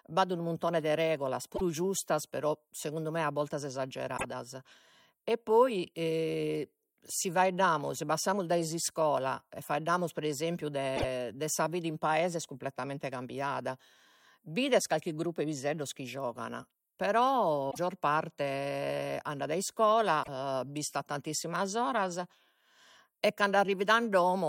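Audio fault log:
1.53–1.61 s, 4.14–4.24 s, 10.93–11.05 s, 17.68–17.78 s and 20.20–20.29 s, damaged data in a compressed stream: five short glitches of about a tenth of a second each, the first right after "unu muntone de regulas", the second after "segundu me a bortas", the third between "e faeddamus pre esempiu" and "de sa vida in". Bad bytes in the coded stream make the decoder misread those frames and lose sync until it finds a clean frame header, so each one comes out as a brief glitch in the sound.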